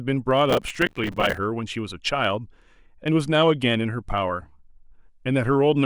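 From 0.1 s right through to 5.85 s there's a fast, steady rattle of tiny ticks, about fifty a second. These are clock slip clicks, likely from two unsynced clocks drifting about a tenth of a percent apart, dropping or repeating single samples. Between 0.5 and 1.38 s, processor overload crackle rides on the speech: dozens of missed buffers, each filled with old audio, leave a gritty tearing that fits buffers around 5 ms long.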